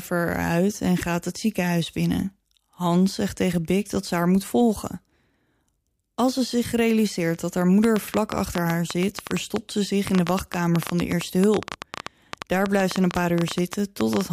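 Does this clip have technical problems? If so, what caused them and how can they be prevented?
Yes. A train of clicks runs from 7.84 to 14.22 s, after "zich realiseert dat haar": about nine similar pops per second, unevenly spaced, clear even in pauses. Unlike random crackle, the clicks share one shape. They likely come from nearby equipment or a faulty connection or power supply. To prevent it, move phones and other devices away from the recording chain and use a stable, properly powered audio interface.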